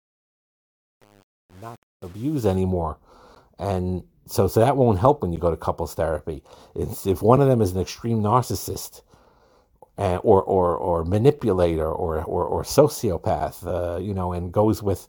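From 0.0 to 2.55 s the speech fades in over a smooth level ramp, but that fade shows truncation distortion. The gain stage evidently keeps too few bits and adds no dither, which fits an 8-bit path. Near the bottom of the ramp the waveform collapses into a handful of coarse steps, so the quiet opening sounds gritty before the level rises clear of the grain.

After that come gaps between stream segments at 3.35, 5.36, 7.36, 9.39, 11.39 and 13.40 s, spaced almost exactly 2 s apart, which matches the segment length. At each boundary the time stamps leave a small hole that the player fills with silence, lasting about 12, 9.5, 6.3, 5.0, 7.8 and 8.4 ms in turn. Each is heard as a short, hard-edged tick of silence interrupting the speech, with no audio lost around it.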